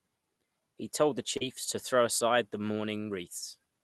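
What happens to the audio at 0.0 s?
At 0.0 s the speech comes through intact, with no fault at that moment.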